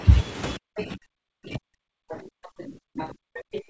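A speech recording from a call in which both ends talked at once. The echo canceller most likely could not tell the local talker apart from the loudspeaker echo, so it turned everything down. The result is speech suppressed in double talk. From 0.57 s to the end of the clip, the talker's speech dips and breaks up, at its deepest by roughly 40 dB, so that syllables thin out or vanish. The same processing likely left residual echo, which is heard as the other side's voice leaking through in short scraps at 0.77–0.83 s, 2.09–2.16 s, 2.44–2.64 s, 2.98–3.09 s and 3.53–3.62 s. Some of these fragments come through nearly as loud as the talker and others sit well below. The audio stops at 8 kHz, which fits a wideband G.722 call codec.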